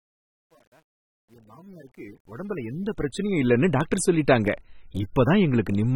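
From 0.0 to 3.58 s there's truncation distortion on a fade, gritty and stepped, worst up to 2.41 s. It fits a level stage keeping about 10 bits with no dither. Throughout, the speech sounds dull and smeared, with nothing above 18.7 kHz and plainly audible codec damage, likely from AAC compression at around 29 kbps.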